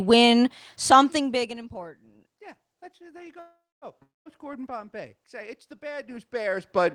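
Packets were likely held up in transit at 3.39 s, just after "there you", and the jitter buffer ran dry: this is a call audio freeze. The receiver stretches the last sound into a fading buzz that settles into about 250 ms of silence, so the gap runs to 3.85 s. When the audio resumes it picks up exactly where it stopped with nothing lost, but everything after sits about 423 ms later than before.

From 4.02 s to 4.28 s comes a long network dropout, where incoming audio likely stopped reaching the receiver altogether. Again the last sound is carried on as a short decaying hiss before roughly 190 ms of silence. This time the missing stretch is never recovered, and when sound returns about 240 ms of the original has been skipped, so the audio jumps forward rather than continuing from the break.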